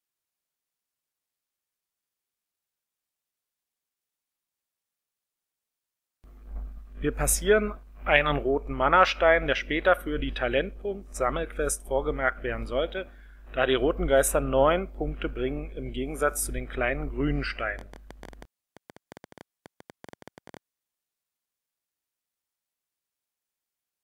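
A train of clicks runs from 17.79 to 20.58 s: about thirty similar pops at an uneven 11.2 per second, reaching about signal level, likely interference or a faulty connection.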